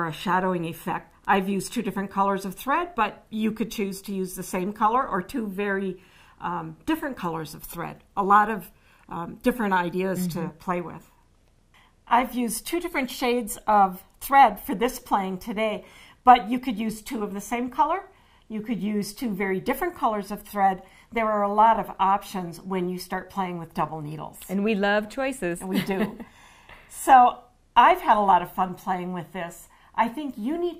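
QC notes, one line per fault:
No faults heard.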